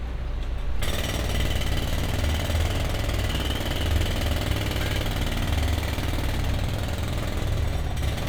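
No technical faults can be heard in this recording of everyday sound. Nothing in the signal path draws attention to itself at any point.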